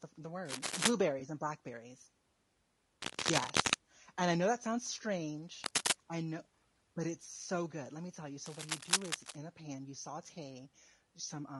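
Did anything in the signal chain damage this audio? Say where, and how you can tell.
Yes. The speech sounds rough and grainy throughout, with a thinned, synthetic top band. The likely cause is low-delay AAC compression (AAC-ELD) at a low bitrate, around 32 kbps.

Scratchy bursts of rustling noise sit over the speech at 0.45–0.92, 3.02–3.74, 5.64–5.93 and 8.46–9.36 s. This points to cable scratch noise from a worn connector in the analogue wiring.

A brief smeared, noisy patch from 1.19 to 1.22 s is AAC frame loss with concealment. It fits a single lost 20 ms frame that the decoder filled in from the preceding spectrum.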